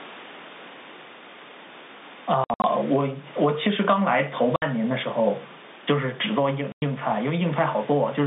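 Throughout the speech there is gain pumping. The level ducks under every loud syllable, a swing of roughly 10 dB, likely from gain set far too high with a fast limiter pulling it back down. On the waveform the envelope looks squashed.

Packet loss filled with silence chops the audio at 2.44–2.64 s, where 140 ms drops out in scattered gaps up to 60 ms long. Shorter holes follow at 4.56–4.62 s (60 ms) and 6.72–6.82 s (100 ms), all fitting 20 ms packets. Each hole shows as a dead-flat line on the waveform and a blank vertical strip on the spectrogram, with hard edges.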